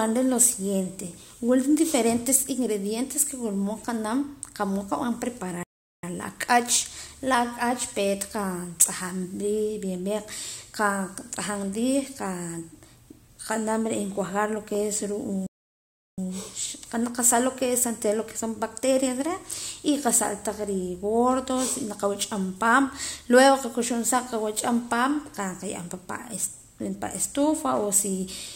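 At 5.63 s and again at 15.46 s the speech cuts off mid-flow into silence for 0.40 s and 0.71 s, a playback stall, likely from the player starving of data; unlike a natural pause, it breaks off mid-flow before the speech resumes.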